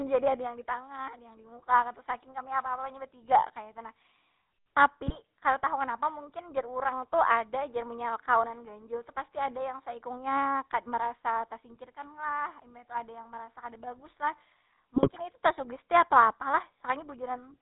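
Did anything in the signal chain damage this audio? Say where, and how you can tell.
Yes, two things: one at the codec stage, one on the network link. The whole clip carries the GSM full-rate codec sound. There's nothing above 4 kHz, and the speech has that buzzy, gravelly texture throughout, which fits the 13 kbps GSM full-rate coder. It builds a vocal-tract filter and excites it with a sparse, regularly spaced pulse train, so the fine detail of the voice source gets replaced by a coarse approximation. The damage is plainly audible.

On top of that there are two bursts of GSM bit errors. The first runs from about 5.06 to 5.19 s, just before "kada tahu kenapa mungkin". The second is longer and rougher, from about 14.96 to 15.21 s, just before "itu tasugesti atau apa". Both break into squawky, gargling sound. Corrupted filter, pitch and gain parameters bend the spectrum and throw the level around frame by frame, and the second burst sounds like it spread across many more frames than the first.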